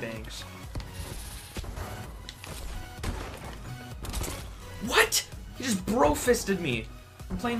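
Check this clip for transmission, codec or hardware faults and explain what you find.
There is one fault, a sudden gain jump. From 1.60 s to 1.77 s the level drops by about 6 dB in a single step, then returns. The likely cause is a digital gain change applied without a ramp. Unlike a fade, there is no gradual slope, and unlike a dropout, the sound continues with the background noise falling in step.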